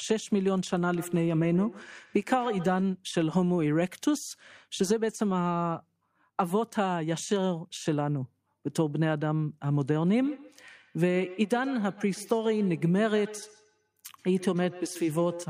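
Feedback echo between two devices appears in this speech clip from 0.95 to 2.93 s and again from 10.19 s to the end. Each stretch of speech returns at an interval of roughly 150 ms, peaking about 16 dB below the direct speech. Two devices sharing one room are on the same call. One plays back what the other's microphone captured, that microphone picks it up again, and neither echo canceller removes sound from the other device's loudspeaker.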